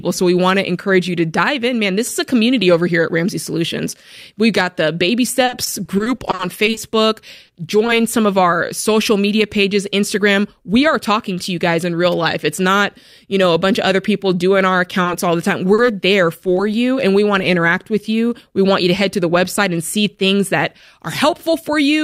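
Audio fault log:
5.45–7.90 s, repeated packet loss (robotic sound): the speech turns choppy, with 15 small holes in quick succession up to "some of our social", the longest 40 ms. Each hole was patched by continuing the previous sound, so about 300 ms is filled in and about 12% of the span is made-up audio. Some 160 ms of real speech is gone, and the next gap arrives before the last has settled.
9.56–10.77 s, jitter buffer speed-up: between "of our social media" and "are talking to you" the speech runs at 103% speed with its pitch unchanged, a pace just short of sounding hurried. This points to a receive buffer that had built up more audio than its target, likely after delayed packets arrived in a bunch. To bring the delay back down, the receiver clipped out short pitch-period slices in a row, about 50 ms in total.
15.03–16.59 s, scattered short gaps: after "other people doing our" and before "you and we want" there are about three brief gaps, with clear speech between them. 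Each marks a packet that was lost or late. The hole was bridged by carrying the last sound forward, around 70 ms of fill in all, the longest about 40 ms, covering roughly 5% of the stretch. No speech is dropped here. Instead the fill adds 45 ms, so the passage is slightly stretched rather than shortened.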